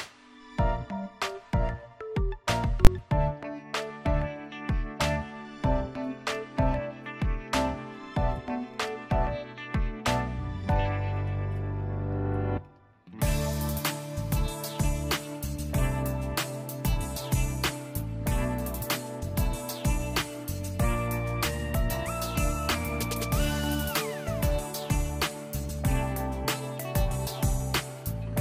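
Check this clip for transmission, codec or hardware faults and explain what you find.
One fault stands out: invalid numbers at full scale, at 2.85 s. A calculation returned infinite or invalid values, and these were pinned to the maximum sample value for a block of about 20 ms. Because the block is so short, it comes across as a single hard bang. Unlike clipping, no louder audio is being flattened, and unlike a dropout, the block is slammed to maximum level instead of going silent.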